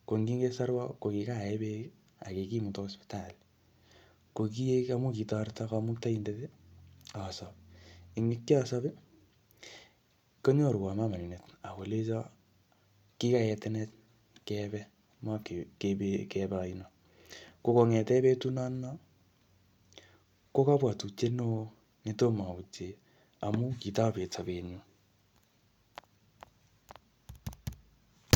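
No technical faults occur at any point in the recording, so there is nothing to describe in time order.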